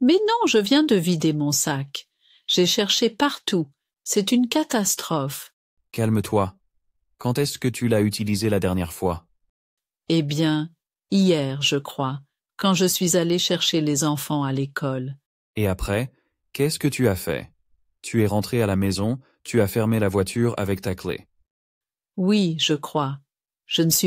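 Nothing is technically wrong with the audio in this clip.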